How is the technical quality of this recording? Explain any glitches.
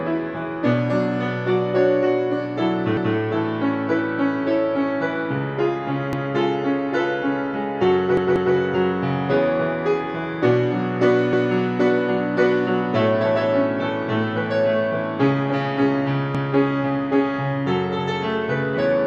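The recording has repeated buffer glitches at 2.97, 6.13, 8.17 (two extra plays, to 8.55), 11.33 and 16.35 s. Each time, the device replays about 186 ms of audio (consistent with an 8192-sample buffer) because fresh data arrived late. Unlike a dropout, nothing goes silent. The same fragment stutters back with a hard join.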